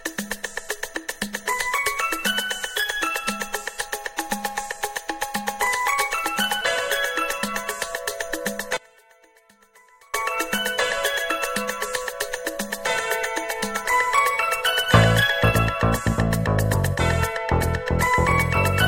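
From 8.77 s to 10.14 s the sound abruptly drops by about 29 dB, with the centred material nearly gone, leaving only a faint residue before the full sound returns. The likely cause is one channel inverted: with one stereo channel's polarity reversed, everything shared by left and right cancels when the two are summed, so only their small difference survives.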